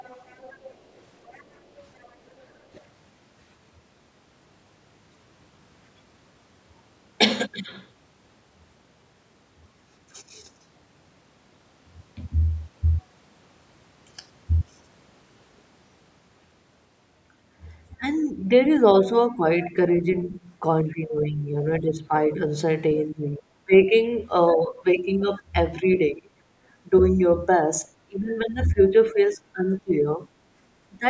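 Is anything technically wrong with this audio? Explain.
Yes. It shows two related faults of a hands-free call.

Other side's voice leaking through: a faint second voice sits under the speech from 0.0 to 2.84 s, about 25 dB down, with brief scraps at 17.92–17.96 s and 25.77–25.96 s. The likely cause is loudspeaker echo that the canceller left in the microphone signal. It is an added voice, not a change to the main talker.

Speech suppressed in double talk: from 17.96 to 31.06 s, for about 5 s in total, the talker's voice dips by as much as roughly 20 dB and loses pieces. This is likely the echo canceller turning everything down while both sides talk at once. Unlike leakage, nothing extra is heard; the wanted speech itself thins and drops out.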